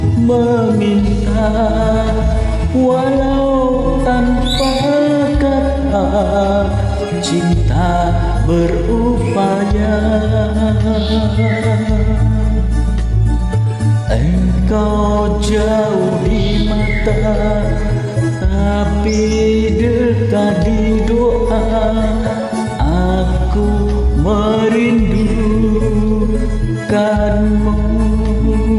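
No technical faults can be heard anywhere in the audio; the signal stays stable and continuous throughout.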